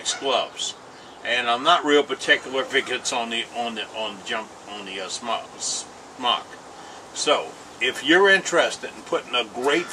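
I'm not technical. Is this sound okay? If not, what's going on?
Yes, it sounds fine; I hear nothing wrong here.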